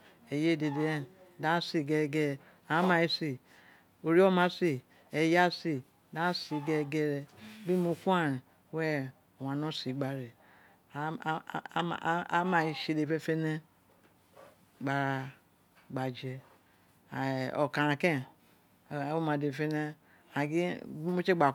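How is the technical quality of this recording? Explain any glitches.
Nothing technical trips up this recording, and there isn't a single glitch to point to anywhere in the speech.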